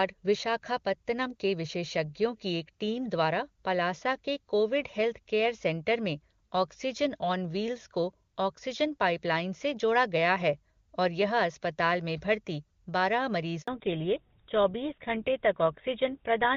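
Speech carried over a mobile call, clear and wideband at first, as HD Voice at a high rate would sound. A handover gap opens at 13.62 s, right after "में भर्ती बारह". The sound drops out for about 60 ms, from 13.62 to 13.68 s, while the call switches networks and no frames arrive. Speech in that moment is lost. Then comes a fallback to narrowband. From 13.68 s to the end, nothing above 4 kHz remains. The speech turns dull and rougher, consistent with a drop from AMR-WB to the older GSM full-rate codec at around 13 kbit/s.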